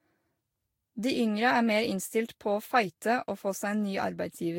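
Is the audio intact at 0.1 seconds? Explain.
No. At 0.1 s the speech already shows generation loss, which runs through the whole clip. It was likely decoded and re-encoded with Vorbis about four times, at a rate of around 60 kbit/s. Each pass quantised the signal again on a shifted frame grid, so the errors piled up. The result sounds swirly and hollow, with smeared consonant attacks, and nothing remains above 16.6 kHz.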